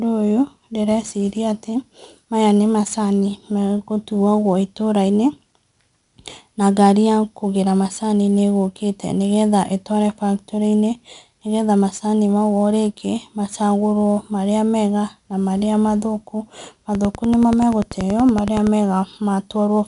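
Throughout, 4-bit ADPCM compression is plainly audible: each sample is coded as a coarse step from a prediction, so a gritty hiss rides on every loud syllable, rising and falling with the speech, unlike a steady noise floor. Nothing sounds above 10.6 kHz, which points to a low sample rate, and the stream fits roughly 89 kbps.

From 16.95 s to 18.68 s, just after "mega na marĩa mathũku", a train of clicks runs at a regular 10.5 per second, about twenty near-identical ticks peaking around 10 dB above the speech and continuing through pauses. Likely interference or a struggling interface; the even spacing separates it from random crackle.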